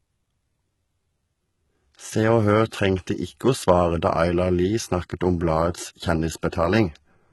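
Throughout the speech, the treble sounds bright but synthetic and poorly matched to the lower range, with heavy codec damage and nothing above 11.8 kHz. That points to likely HE-AAC compression at a low bitrate, around 16 kbps. Unlike plain low-pass loss, the top band is present but rebuilt from copied lower bands.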